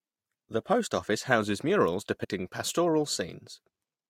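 Speech with compressed frames skipped. At 0.52 s the audio jumps ahead by about 20 ms, roughly one frame. From 2.23 to 2.25 s it jumps about 100 ms, fitting around four frames.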